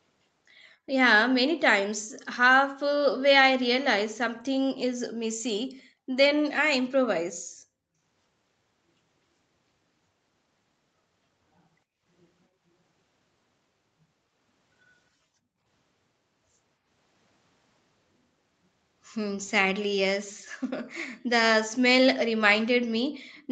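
From 23.36 to 23.41 s, a very faint copy of the speech appears about 261 ms behind the original and roughly 35 dB quieter, likely an echo leak past a loudspeaker's echo canceller. Unlike room reverb, it is a separate delayed repeat, not a smooth decay.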